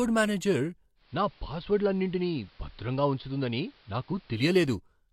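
From 0.95 to 4.51 s there is digital radio blending to analogue. The digital signal drops, and a 182 ms cross-fade switches to AM: about 3 dB quieter, faint hiss.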